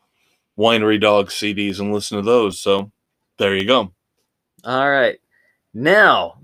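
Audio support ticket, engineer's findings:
CD scratch ticks, speech, 1.7–4.15 s: ten regular ticks, about four per second, each a few ms. Surface scratch exceeds error correction once per rotation; player interpolates/mutes samples.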